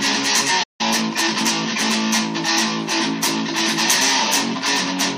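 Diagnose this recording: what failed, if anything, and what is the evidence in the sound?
A playback stall at the playback stage: the sound stops mid-flow at 0.63 s and stays silent for about 162 ms, until 0.81 s. The likely cause is the player running out of buffered data or its output thread being blocked. A packet-loss dropout would simply leave a hole, but here the silence is followed by an audible recovery, so the gap marks an output pause rather than a patch of missing material.

That recovery is time-compressed catch-up at the same playback stage. From 0.81 to 1.45 s the audio runs about 1.25 times faster, but its pitch stays normal. The player is working off the backlog left by the stall by removing short segments and cross-fading across the joins. A resampling or clock-rate error would raise the pitch along with the tempo, and it would not be confined to the stretch right after the gap.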